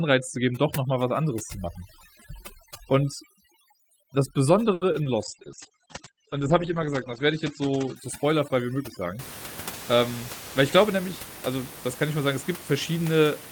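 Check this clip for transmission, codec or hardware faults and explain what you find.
Four kinds of fault are audible, all within the first 9.2 seconds.

Overdone noise removal, 0.0 to 9.19 s: a noise suppressor set too aggressively cuts bands near its noise estimate, leaving near-silent gaps with twinkling specks.

Short stall from a late packet, 4.73 to 4.86 s: a packet arrived late, the jitter buffer ran dry, and the receiver stretched the last sound for about 80 ms, so it hangs unnaturally.

Short concealed packet loss, 4.92 to 4.96 s and 5.04 to 5.08 s: lost packets were patched by extending the previous sound for 20 ms each, heard as brief smears or small wobbles.

Call bitrate drop, 5.24 to 8.08 s: the encoder was pushed from 32 to 11 kbps, holding the lowest rate for about 1.8 s, and bandwidth shrank from 20 kHz to 8 kHz. The speech turns rough and muffled.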